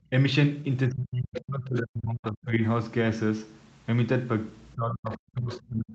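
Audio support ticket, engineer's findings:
Speech suppressed in double talk, 0.88–2.61 s and 4.74 s to end of clip. Talker's level dips by up to about 40 dB, roughly 1.5 s lost in the first span. Likely echo canceller unable to separate near talker from loudspeaker echo, attenuating both.

Other side's voice leaking through, 1.36–1.41 s and 1.75–1.79 s. Brief scraps of a second voice, about 10 dB then about 30 dB below the talker. Likely residual loudspeaker echo not removed from microphone by echo canceller.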